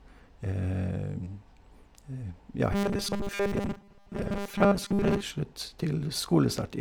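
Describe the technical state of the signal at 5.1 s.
At 5.1 s you're still inside the robotic sound from repeated short buffers, running from 2.73 to 5.22 s. New audio is likely arriving too seldom, so a 5 ms chunk gets looped over most of the stretch, stamping a rigid 200 Hz metallic buzz over the speech.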